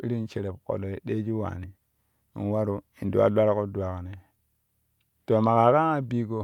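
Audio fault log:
No technical fault can be heard in the signal at any point in the recording.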